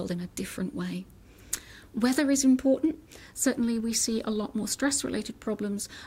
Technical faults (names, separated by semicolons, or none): filter restarted on every block